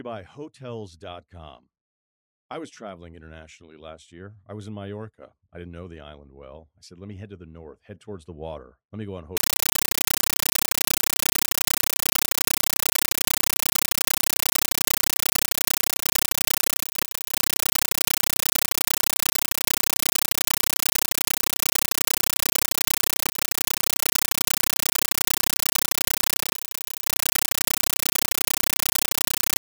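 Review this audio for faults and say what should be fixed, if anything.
From 9.37 s, just after "me go on", to the end, the speech is replaced by a compressed stream played as audio. A Dolby Digital bitstream is being treated as plain PCM samples. Each data frame becomes a 9.33 ms burst of noise, then silence from zero padding. The bursts repeat 31.25 times a second. The result is loud, rattling static. This fits a 448 kbps AC-3 stream. To prevent it, set the receiver to decode the bitstream or the source to output PCM.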